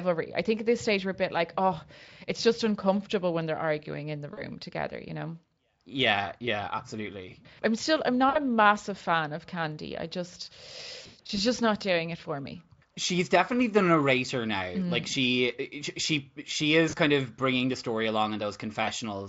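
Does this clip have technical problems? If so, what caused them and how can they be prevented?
Yes. VoIP packet loss concealed by the speech codec is heard at 4.33, 8.29, 11.01 to 11.40, 16.89 and 18.83 s. The decoder fills the lost packets by stretching the last sound into a fading buzz. A steadier network path with forward error correction would prevent it.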